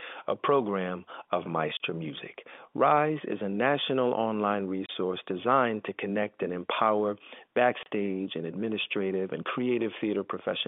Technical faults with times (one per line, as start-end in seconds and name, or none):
1.77-1.79 packet loss filled with silence
4.86-4.89 packet loss filled with silence
7.83-7.86 packet loss filled with silence